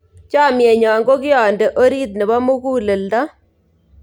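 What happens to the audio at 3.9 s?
Nothing goes wrong at 3.9 s; the speech carries on intact through that moment.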